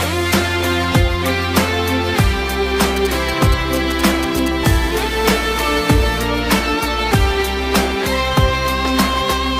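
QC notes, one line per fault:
2.96–4.48 s, GSM signalling bursts: a galloping dit-dit-dit of short 217 Hz buzzes, roughly 10 dB below the signal. A nearby 2G phone is signalling, sending short groups of radio bursts at 217 Hz that the audio circuitry rectifies into audible pulses.
4.65–6.19 s, GSM phone buzz: a hard, raspy, continuous buzz at 217 Hz, rich in harmonics and about 18 dB below the signal. A phone in a call transmits bursts 217 times a second, and the circuit demodulates each radio pulse into sound unrelated to the programme.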